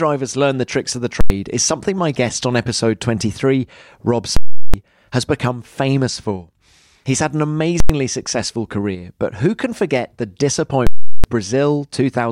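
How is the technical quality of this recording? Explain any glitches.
The recording is damaged by four loud digital bursts in the speech, all caused by invalid numbers at full scale.

At 1.21–1.30 s, between "the tricks of the" and "is something my guest", and at 7.80–7.90 s, between "had an" and "successful career but who", a calculation produced infinite or invalid values. These were pinned to one extreme value for about 0.09 s, which fits a 4096-sample block, and each one is heard as a single harsh bang.

At 4.37–4.74 s, just before "has become famous for", and again at 10.87–11.24 s, the same failure lasts about 0.37 s, which fits a 16384-sample block. The output sits at a constant extreme, so you hear a loud pop where it jumps there and another where it drops back, with silence between.

Ordinary clipping flattens the peaks but leaves the sound audible. These blocks replace the audio entirely for their whole length, with no sound underneath.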